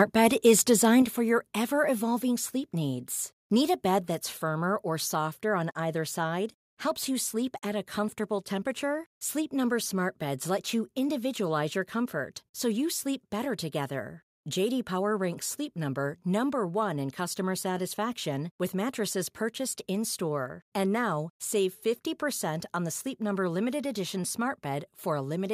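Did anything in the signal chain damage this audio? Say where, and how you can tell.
Yes. Microphone overload, 0.2 to 0.52 s: the loudest speech peaks are squared off with a crackling edge, about 2 dB past the limit, on roughly one or two percent of samples. This is likely the input gain driving the converter into clipping.

Microphone volume stepped down, at 1.02 s, 2.04 s and 4.08 s: speech and background drop abruptly by about 5, 2 and 3 dB, just before "for your ever", "sleep needs" and "firmer or softer on". This is likely call processing lowering the device's input volume.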